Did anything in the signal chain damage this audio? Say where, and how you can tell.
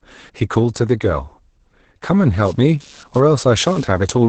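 Yes. At the codec stage, Opus voice compression runs throughout: heavy damage, with nothing above 8.6 kHz, and a muffled, hoarse, robotic texture that fits a SILK coder near 10 kbps, not a plain low-pass.

In the analogue wiring, computer activity noise enters at 2.45 s and lasts to the end. It is a buzz around 150 Hz, roughly 30 dB down, riding ground shifts from computer load. Unlike mains hum, it starts abruptly and isn't at 50 or 60 Hz.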